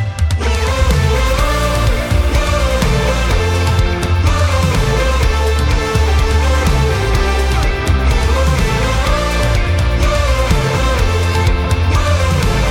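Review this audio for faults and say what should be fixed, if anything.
Nothing here needs fixing.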